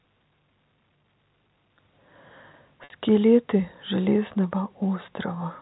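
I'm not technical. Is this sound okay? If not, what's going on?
No. At 2.84 to 2.90 seconds, packet loss with pitch repetition: 60 ms of speech was lost, and the receiver repeated the last sound, briefly making it held and buzzy.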